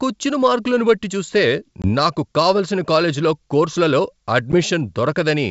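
Packet loss on an ADPCM call strikes twice. At 1.82 to 1.90 s, between "మార్కులను బట్టి చూస్తే" and "నాకు కావలసిన కాలేజీలో కోర్సులలో", about 20 ms of audio goes missing, which points to a couple of lost packets. At 4.52 to 4.59 s, after "నాకు కావలసిన కాలేజీలో కోర్సులలో", about 10 ms is lost, consistent with a single packet. Each gap is filled with silence, leaving a hard-edged hole in the otherwise clear 64 kbit/s G.722 wideband sound. Because the receiving decoder's predictor and step size no longer match the sender's, the audio resumes with brief, slight distortion, then settles within some tens of milliseconds.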